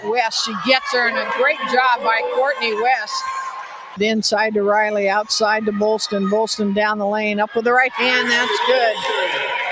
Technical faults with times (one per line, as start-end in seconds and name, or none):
0.00-9.72 noise suppressor applied to music or sounds
2.96-3.98 sound cut by the noise suppressor